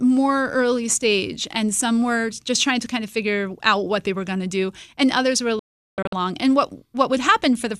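Just after "and others were a", from 5.59 to 6.13 s, the speech suffers a digital broadcast dropout: the receiver mutes on bad frames, fading out within about 3 ms. About 456 ms is lost in short holes, the longest 384 ms, before the programme returns.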